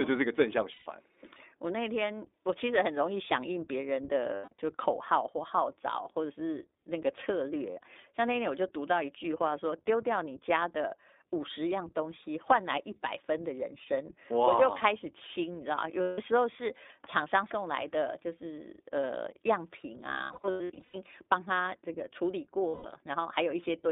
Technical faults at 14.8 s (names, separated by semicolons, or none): iLBC codec